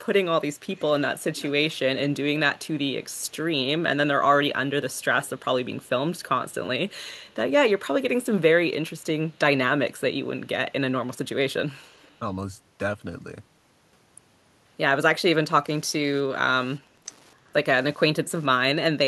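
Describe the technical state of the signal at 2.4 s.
Echo leak, 0.76 to 3.46 s: a faint delayed copy of the speech trails about 251 ms behind it, well below the main level. The likely cause is a far-end loudspeaker whose echo canceller let part of the microphone pickup return down the line.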